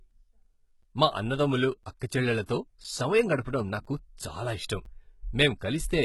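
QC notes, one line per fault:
Throughout: HE-AAC compression, likely the cause of the heavy coding damage heard across the whole speech clip. Only the lower spectrum carries real detail; the treble is rebuilt by copying lower bands upward under a coarse envelope, so it sounds bright but false, with harmonics that no longer line up above the crossover. Sibilants come out gritty and lispy, nothing is present above 11.8 kHz, and the overall grain fits a very low bitrate near 16 kbps.
0.83, 1.83, 2.84, 3.85, 4.85 s: gap between chunks, five short holes of about 7 ms each, repeating every 1.0 s. The audio arrives in one-second chunks with a sliver of silence left at each join, as happens when codec padding or a late-starting player separates the blocks. Nothing is lost, but the sound is interrupted at each join, giving a regular, clock-like stutter through the clip.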